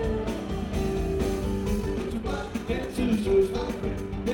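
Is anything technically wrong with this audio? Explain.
Yes. From about 1.74 s to the end, the audio sounds like a time-stretched section: the pace suddenly jumps to roughly 1.67 times normal speed while the pitch stays exactly where it was. That's likely software squeezing the material to fit a length, keeping pitch steady by dropping short slices rather than resampling. You can hear it as a rushed quality, with everything crammed together.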